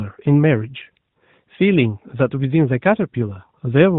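No technical faults are present in this recording.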